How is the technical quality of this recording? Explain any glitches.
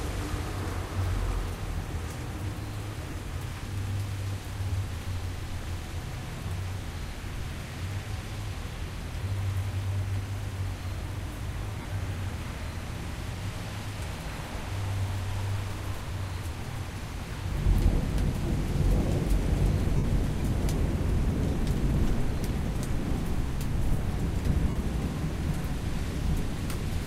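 Five brief dropouts from lost LE Audio frames, at 3.10–3.13, 11.79–11.85, 17.50, 19.97–20.04 and 24.69–24.76 s, lasting roughly 15 to 68 ms. The LC3 decoder fills each gap by repeating the last spectrum with random signs, so the sound turns into a short noisy smear. In the longer gaps, near 20.0 and 24.7 s, that smear fades toward silence. The gap near 11.8 s is broken into scattered pieces.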